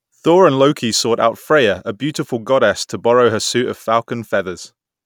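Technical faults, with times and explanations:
No technical faults can be heard in this speech recording.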